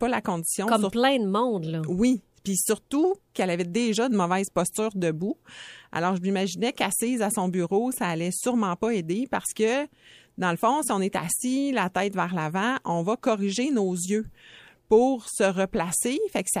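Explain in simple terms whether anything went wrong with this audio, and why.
Clock slip clicks run from 0.32 s to 15.81 s: faint ticks about once a second, around fifteen in all, heard over the speech and absent in pauses. The likely cause is two pieces of equipment each keeping time by its own clock, roughly 20 parts per million apart. Each time that small difference adds up to one whole sample, a single sample is dropped or doubled, leaving a tiny click.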